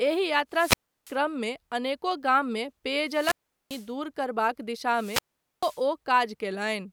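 A speech recording with three wireless microphone squelch dropouts. The first runs from 0.51 to 1.18 s, just before "अनेको गाममे", with a mute of 334 ms. The second, just after "अनेको गाममे", spans 3.04 to 3.91 s with a 392 ms mute. The third spans 4.89 to 5.85 s with a 440 ms mute. Each time, the FM link from the transmitter weakens until the receiver's squelch gate closes, so the sound swells into hiss, cuts to near silence, then reopens.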